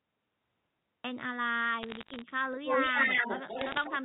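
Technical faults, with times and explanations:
0.00–1.04 s: cut-off start. It's dead digital silence until 1.04 s, then the sound comes in already mid-flow, with no attack or fade-in. The recording or stream clearly started late, so it jumps straight into the middle of something rather than easing in.
1.82–2.22 s and 3.59–3.84 s: bit errors on a digital phone line. Both stretches have a scatter of sharp ticks and crackle over the speech. Roughly half a percent of bits got flipped on the line, and each hit corrupts a single sample. The louder ticks come from hits on the sign or high bits.
2.52 s to the end: echo leak. A second copy of the voice trails the original by 196 ms and sits a little louder than the speech itself. The likely cause is a far-end loudspeaker whose echo canceller let its own microphone pickup back down the line, all over the mu-law telephone band.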